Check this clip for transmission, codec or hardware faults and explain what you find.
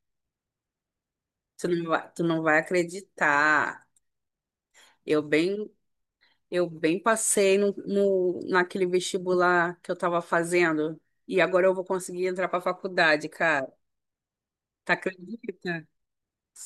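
Nothing in the speech signal points to a technical problem, as the audio stays continuous and undamaged throughout, with nothing to report.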